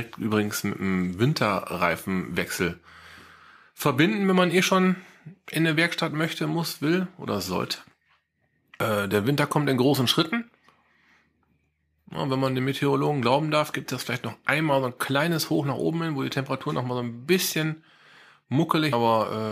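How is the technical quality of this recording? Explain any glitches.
The speech is marred by two brief glitches from damaged data in a compressed stream, at 8.80 s and again at 18.93 s. At each point a stretch of the encoded data was wrong, so the decoder could not read those frames properly, lost its place in the stream, and had to hunt for the next valid frame header before resuming. Each event is a single momentary disruption, heard as a short chirp or blip that breaks into the speech.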